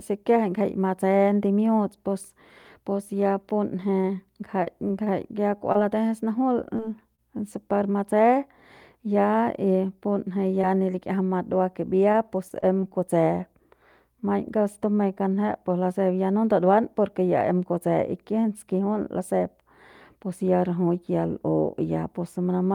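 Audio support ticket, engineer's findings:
Scattered short gaps, 4.01 to 7.20 s. Brief ticks and smears, around seven of them. Longest hole roughly 30 ms. Packet loss concealment filling each gap by extending the last sound. About 5% of the span patched.
Scattered short gaps again, 10.61 to 12.92 s. Same signature, around seven hiccups. Longest about 20 ms. Lost or late packets, concealed by continuation. Speech stays clear between them.

Short stall from a late packet, 14.20 to 14.24 s. Sound held too long, slight buzz or dip. Jitter buffer underrun. Receiver stretched about 20 ms of audio while waiting, then resumed at the same point. Nothing lost. Playout delay grew by about 20 ms.

Jitter buffer speed-up, 18.30 to 18.89 s. Speech hurried, pitch unchanged. Running at 107% speed. Buffer over its target depth, likely from a burst of delayed packets. Short pitch-period slices cut repeatedly, roughly 50 ms removed in total.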